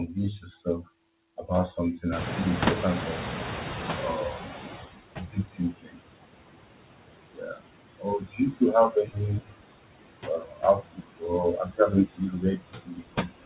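Noise suppressor artifacts run through the whole clip. The suppressor pulls down whatever it judges to be steady noise, by about 18 dB, band by band and frame by frame. So the background dips between phrases and swells back up under the speech. Everything also sits in a narrow band with nothing above 4 kHz, which fits a narrowband call codec like G.711.

At about 2 s the room noise jumps by roughly 24 dB, ending up only about 8 dB below the speech. That's where the noise suppressor catching up shows, from 2.11 to 4.9 s. Its noise estimate trails the new level, so for nearly 2.8 s the louder noise comes through with too little reduction before it settles down by about 17 dB.

After that, speech gets cut by the noise suppressor again and again. It mistakes parts of the speech for noise and turns them down along with the background, by about 19 to 22 dB at the deepest. This happens at 5.18–6.0, 7.33–7.63, 7.96–8.61, 8.9–9.18, 9.4–9.56, 10.25–11.24 and from 11.65 s to the end. 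Within those spans, stretches of a few hundred milliseconds sound swallowed or faint.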